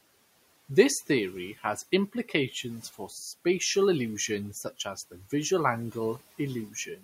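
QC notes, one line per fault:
2.83–3.12 s, speech cut by the noise suppressor: the suppressor mistook quiet parts of the speech for background and turned them down by up to about 11 dB, roughly a tenth of a second in all, so those moments sound swallowed and faint.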